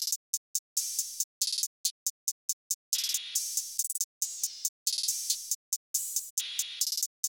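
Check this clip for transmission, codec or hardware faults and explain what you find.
There's one problem here: a gap between chunks, showing up twice, at 3.78 s and again at 6.80 s. Each time the sound drops out for about 6.5 ms. The audio was moved in one-second pieces, and silence got left at the joins, likely from padding or a player starting each piece a touch late. Nothing's actually lost; it just drops into a tiny hole and carries on.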